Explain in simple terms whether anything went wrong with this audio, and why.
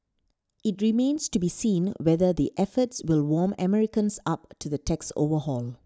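Nothing went wrong with this audio; the speech comes through with no faults to point to.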